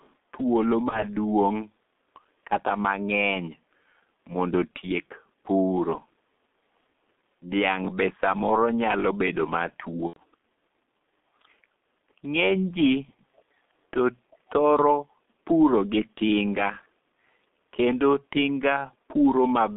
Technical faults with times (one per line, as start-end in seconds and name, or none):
0.00-19.76 G.723.1 codec
0.00-0.14 echo leak
0.89-1.05 VoIP packet loss concealed by the speech codec
10.07-10.17 VoIP packet loss concealed by the speech codec